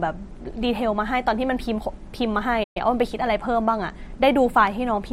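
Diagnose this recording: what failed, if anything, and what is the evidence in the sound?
The failure is at the playback end: a playback stall in the middle of the speech. At 2.63 s the sound cuts off mid-flow and stays silent until 2.77 s, a hole of about 120 ms, then carries on. The likely cause is that the player ran dry of buffered data or had its output thread blocked, so nothing was fed to the device until it caught up.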